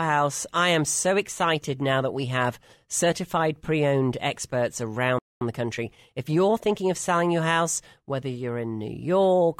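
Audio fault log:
5.19–5.41 s, playback stall: the player likely ran out of buffered data or had its output thread blocked, so the speech cuts off just after "certified pre owned experts" and drops to silence for about 225 ms before resuming where it stopped.
5.41–6.91 s, time-compressed catch-up: to work off the backlog from that stall, the player trims small slices and cross-fades across the joins, running about 1.15 times fast. The speech sounds hurried at unchanged pitch until "of selling your house".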